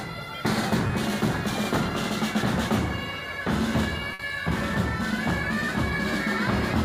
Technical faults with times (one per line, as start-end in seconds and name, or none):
0.87-0.91 short concealed packet loss
4.13-4.21 burst of packet loss